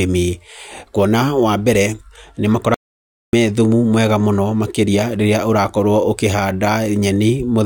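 An audio dropout to silence runs from 2.74 s to 3.33 s in this speech recording, removing roughly 0.59 s of the talker's delivery. The speech breaks off mid-flow and resumes abruptly, and the gap between is dead digital silence with no room tone or background noise underneath. That pattern points to the input signal being lost while recording continued, most likely a momentary disconnection, link failure or accidental mute, so the writer stored silence and whatever was spoken then is unrecoverable.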